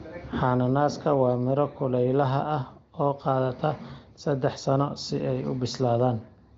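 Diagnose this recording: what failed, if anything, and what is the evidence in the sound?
Nothing in the chain has failed: the speech sits on a wideband telephone path whose content stops at about 7.5 kHz, which fits the AMR wideband (HD Voice) codec at a high rate, around 23 kbit/s, and any coding traces are faint at most.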